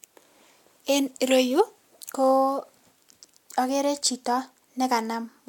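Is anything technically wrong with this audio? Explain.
No, nothing in this speech recording points to a technical fault.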